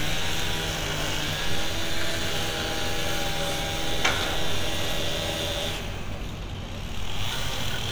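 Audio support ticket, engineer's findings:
No fault found on listening. Sounds throughout, no action required on this ticket.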